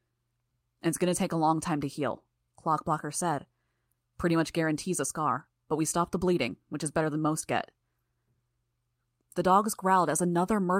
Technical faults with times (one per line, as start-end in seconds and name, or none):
none